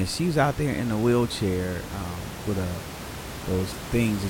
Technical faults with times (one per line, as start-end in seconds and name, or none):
none